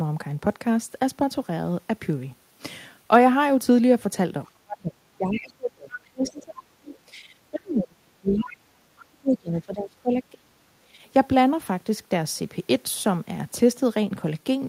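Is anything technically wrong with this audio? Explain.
Yes. The speech has two related echo-control faults in the middle third of the clip.

Speech suppressed in double talk occurs from 4.46 to 6.79 s, 7.06 to 7.28 s, 7.51 to 10.55 s and 10.79 to 10.96 s. The talker's level repeatedly falls away, by roughly 30 to 35 dB in the two long stretches and by about 15 to 20 dB in the short ones. The likely cause is an echo canceller that could not tell local speech from loudspeaker echo and attenuated both.

The other side's voice leaking through is heard as brief fragments at 5.92 to 5.98 s, 6.27 to 6.32 s, 6.85 to 6.98 s and 8.27 to 8.57 s. They sit about 15 to 25 dB below the talker. This is likely far-end audio from the loudspeaker that the echo canceller did not fully remove from the microphone signal. The fragments arrive as short scraps, three of them during the suppressed passages.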